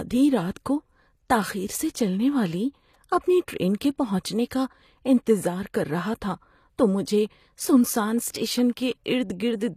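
HE-AAC compression runs throughout this speech recording, from start to finish, with plainly audible damage. Only the lower spectrum sounds genuinely coded. The treble above it has been rebuilt by spectral band replication, with lower bands copied upward and shaped by a coarse envelope, so s sounds come out gritty and metallic rather than clean. Nothing is present above 14.9 kHz. The extent of the damage fits a low bitrate of around 24 kbps, which is likely the cause.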